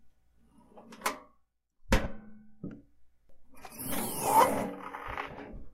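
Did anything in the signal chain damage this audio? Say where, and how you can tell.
Yes. The damage happens at the network stage, on the Bluetooth link, as lost LE Audio frames. There are two dropouts. The first runs from 2.04 to 2.06 s and lasts about 20 ms, which fits two lost 10 ms frames. The second is a single 10 ms gap at 4.25 s. Neither gap goes silent. Each becomes a brief noisy smear where the sound should continue. The LC3 decoder filled each gap by replaying the last spectrum with randomised signs. The light coding loss elsewhere is a separate, normal part of the codec.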